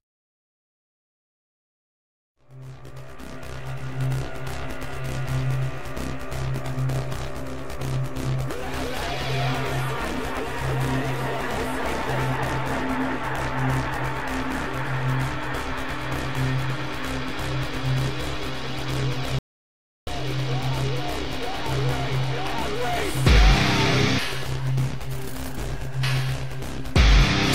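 At 19.39 s the sound cuts off abruptly and the clip goes to silence, with no room tone at all, until it returns mid-flow at 20.07 s. That is an audio dropout to silence lasting about 0.68 s. The likely cause is a momentary loss of input while recording continued writing silence, so whatever occurred in that gap is gone.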